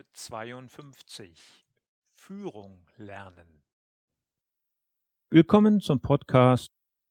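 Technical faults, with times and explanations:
Nothing stood out as a technical problem on listening to this speech recording.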